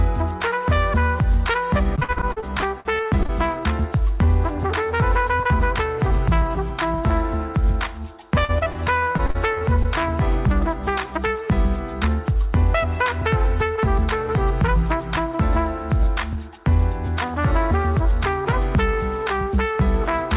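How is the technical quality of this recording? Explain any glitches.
The recording has two bursts of choppy, robotic sound and one brief stretch that drags slightly. The narrowband call path cuts everything above 4 kHz, which fits a G.711 A-law telephone codec at 64 kbps.

From 1.96 to 3.30 s and again from 8.45 to 9.86 s, the sound turns choppy and robotic, with pieces missing. This is repeated packet loss (robotic sound). Packets kept going missing, over a dozen holes in each stretch, the longest 52 ms and 39 ms. The receiver papered over each hole by stretching the last sound, covering about 29% and 22% of those spans.

From 3.07 to 4.27 s, overlapping the end of the first burst, the audio runs at 95% speed with drawn-out sounds but unchanged pitch. This is a jitter buffer slow-down. Running short of reserve, the receiver repeated single pitch periods, adding 71 ms to rebuild its cushion.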